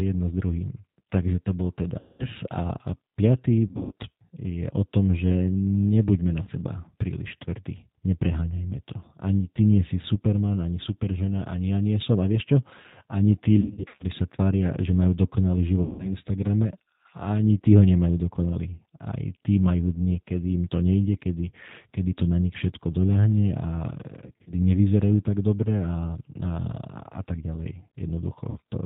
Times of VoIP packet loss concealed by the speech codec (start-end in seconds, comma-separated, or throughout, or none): 1.99-2.27, 3.67-3.92, 6.43-6.50, 13.60-14.05, 15.83-16.13, 24.26-24.53, 28.50-28.58